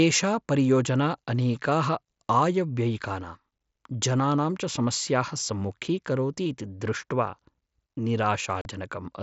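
Near the end of this speech recording, at 8.61 s, the voice drops out abruptly for about 40 ms and resumes at 8.66 s, with hard edges that make the hole sound like a brief chop. Roughly 37.5 ms of audio is missing, consistent with a handful of consecutive packets lost on the headset link. This is unconcealed Bluetooth headset packet loss: nothing filled the gap, so silence or an idle pattern replaced the speech. The wideband mSBC link carrying it adds only a light graininess.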